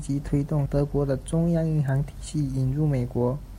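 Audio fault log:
0.66 s, compressed frames skipped: the speech jumps forward abruptly, losing roughly four tenths of a second of audio, which points to about fifteen consecutive 32 ms frames that were missing from the stream or rejected by the decoder as damaged.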